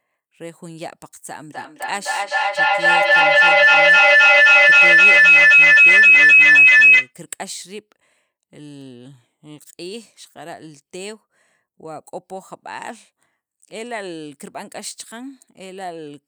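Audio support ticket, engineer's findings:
Feedback howl, 1.53 to 7.15 s. Tonal ring near 3 kHz grows over the speech. Peaks about 22 dB above speech level. Pulses roughly every third of a second. Cause: two endpoints on the call sharing one room. Mic picks up the other loudspeaker. Each pass through the loop adds gain, so repeats build instead of decaying. Loop narrows to its favoured frequency. Pulse rate reflects the loop's round-trip delay. Stops at 7.15 s when the loop breaks.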